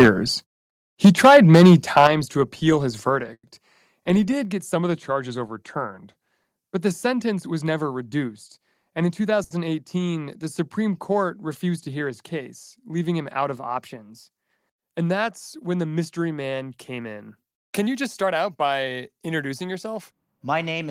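Harsh, crackling tops cut into the loudest speech from 0.0 to 0.09 s and again from 1.04 to 2.07 s, peaks pushed about 8 dB past full scale. This is microphone overload: the input volume was likely set so high that the converter flattened every peak, leaving about a tenth or more of the samples clipped.

The level drops twice in sudden steps, by about 2 dB at 1.06 s and by about 8 dB at 2.07 s, just before "to appeal his". That is the microphone volume stepped down, most likely the call software reacting to the clipping by cutting the device's input gain in one move each time.

Right after "to appeal his", from 3.33 to 3.45 s, the last sound is carried on as a fading buzz or hiss for about 100 ms, with roughly 60 ms of near silence, before the speech resumes exactly where it stopped. This call audio freeze likely came from delayed packets emptying the jitter buffer, so a gap was inserted without anything going missing.

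From 4.75 to 6.32 s the speech sags about a semitone flat and runs about 5.7% slow, then snaps back. The opposite happens from 13.56 to 14.69 s, about a semitone sharp and 5.7% fast. Both are a drift correction step, likely clock-matching software changing the playback rate in one jump to rebalance its buffer.

At 9.44 to 9.53 s one sound is held about 70 ms too long with a slight buzzy dip, then continues without a break in the content. This short stall from a late packet happened because the jitter buffer ran dry and the receiver stretched the last sound until the packet arrived.

After "mystery man came in", from 17.36 to 18.97 s, the speech sounds hurried, at about 107% speed with unchanged pitch. This jitter buffer speed-up is likely the receiver trimming surplus buffered audio, cutting roughly 150 ms in many tiny pitch-period slices to reduce delay.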